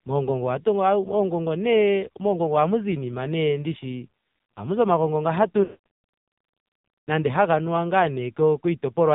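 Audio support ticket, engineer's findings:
AMR narrowband mobile codec throughout: buzzy, synthetic speech, heavy damage; spectrogram shows nothing above 4 kHz. Coarse excitation points to a low AMR-NB mode near 5.9 kbps.

Lost AMR speech frames, 5.64–5.80 s, just after "zi omagongo nga hatu": sound smears, then fades to silence. Waveform shows a decaying envelope. The length fits a run of about 220 ms of concealed frames.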